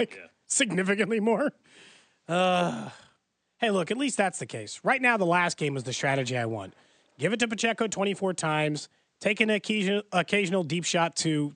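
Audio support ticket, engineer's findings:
No faults found in the speech signal; the room's background noise sits about 50 dB below the speech and belongs to the recording environment, not the system.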